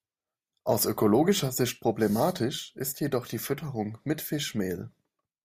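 No technical faults can be heard anywhere in this speech recording.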